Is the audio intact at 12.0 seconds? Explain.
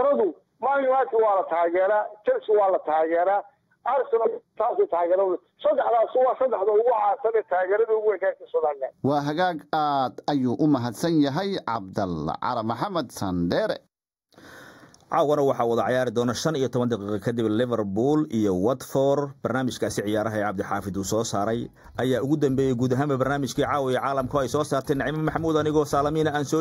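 No. At 12.0 s, as throughout the whole clip, there is channel delay causing comb filtering. One channel arrives a fraction of a millisecond, roughly 0.2 ms, behind the other, and when the two are summed to mono the shared content cancels at evenly spaced frequencies. The first notch sits around 3 kHz, with further notches repeating above it, so the sound at this moment is hollow and phasey, with fixed notches.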